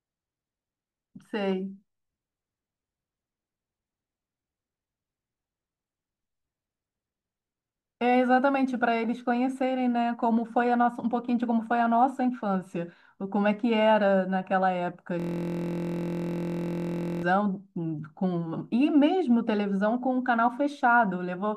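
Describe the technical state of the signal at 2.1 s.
At 2.1 s the speech signal is intact, with no audible fault at that moment.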